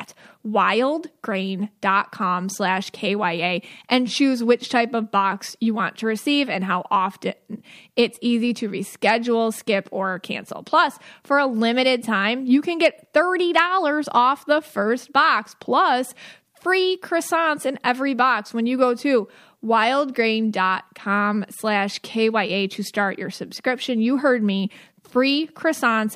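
At 13.57 s the speech hits hard clipping, lasting until 13.60 s. For that short stretch the signal runs about 2 dB beyond what one stage in the chain can pass. The peaks are sliced off flat instead of rounding over. Those squared tops add harmonics high in the spectrum. Because the overload is mild and brief, it comes across as a quick crackle on the loudest moment rather than a sustained fuzz.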